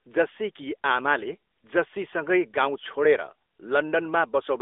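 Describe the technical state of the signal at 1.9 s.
At 1.9 s the speech carries the AMR narrowband mobile codec signature, present across the whole clip rather than at that instant alone. The line band runs roughly 300 Hz to 3.6 kHz, with nothing above 3.8 kHz. The codec rebuilds the voice from a vocal-tract model excited by sparse pulses in short subframes, and the coding damage is plainly audible as a buzzy, synthetic edge, which fits a mid-rate mode around 10.2 kbps.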